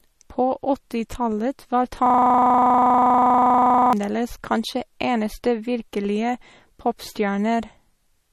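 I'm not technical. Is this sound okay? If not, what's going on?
No. From 2.06 to 3.93 s a system hang loop repeats one 40 ms scrap of speech dozens of times, making a 25-per-second buzz, before "kanskje eneste" resumes. Throughout, the speech sounds watery, with nothing above 13.6 kHz, most likely from heavy MP3 compression.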